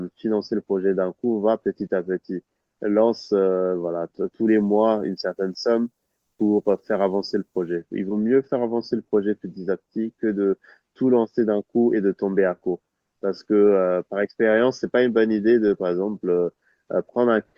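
Speech, which from 4.48 to 7.76 s turns thin, bright and sibilant: pre-emphasis left on, with treble about 11 dB too strong at 10 kHz, consistent with an uncorrected 50 µs FM curve.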